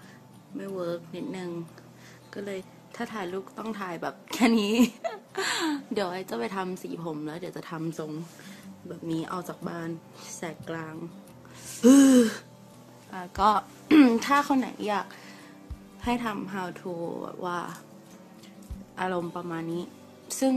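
Two short blips cut through the audio at 2.60 s and 11.82 s. This is damaged data in a compressed stream: corrupted frames make the decoder lose sync until the next frame header.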